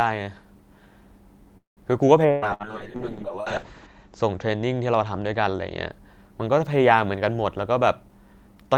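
At 1.57 s a call audio freeze interrupts the speech, most likely because packets were held up in transit and the jitter buffer ran dry. The receiver stretches the last sound into a fading buzz or hiss for a moment, then about 140 ms of silence, and at 1.80 s the speech continues exactly where it stopped. The 194 ms pause is inserted rather than cut out, so nothing is lost, but everything after it arrives that much later.

From 2.26 s to 5.96 s a call bitrate drop sets in: the bandwidth estimate collapsed and Opus was pushed from 32 kbps down to 7 kbps, sitting at the bottom for about 1.6 s. With so few bits the encoder quantises coarsely and narrows the audio band from 20 kHz to 8 kHz. The speech turns muffled and rough, with a watery, smeared texture, until the rate climbs back.

Inside that stretch come two bursts of packet loss, at 2.31 s to 2.45 s and 2.54 s to 2.63 s. Consecutive packets never arrived in time, so the receiver concealed each gap by extending the preceding sound and fading it down. 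Each burst is heard as a brief held buzz or dying hiss, and then the speech jumps forward. About 120 ms and 60 ms of the original are simply gone.

From 7.62 s onward a jitter buffer speed-up takes over. The buffer had built up more delay than its target, so the receiver trimmed short pitch-period slices again and again, removing about a tenth of a second overall. The speech plays at about 109% speed without any change in pitch, and it sounds hurried through to the end.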